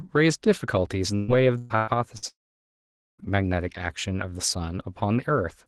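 Speech carried over a call codec whose top end stops near 12 kHz, as expected for Opus at a low bitrate, breaks up from 1.15 to 2.25 s with repeated packet loss, giving a robotic, choppy sound. Four holes, the longest about 125 ms, are each bridged by stretching the preceding sound, so roughly 37% of that span is synthetic fill rather than real audio. From 2.28 to 3.21 s about 0.9 s of audio is gone: a brief smeared continuation of the last sound dies away, leaving roughly 0.84 s of silence before the speech resumes with the missing part skipped, the likely cause being a long network dropout.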